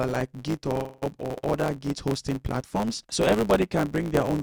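From start to finish there's a steady buzz at 109 Hz, and everything runs about 1.09 times too fast while keeping roughly its normal pitch. That's a block size mismatch (truncated): one stage hands over longer blocks than the next one reads, so the tail of every block gets dropped.

Then, from 0.77 to 1.04 s, the audio stalls. The last bit of sound gets stretched into a fading buzz or hiss for about 273 ms, and afterward it picks up exactly where it stopped, with nothing lost, just later. That's a call audio freeze, likely from packets held up until the jitter buffer ran dry.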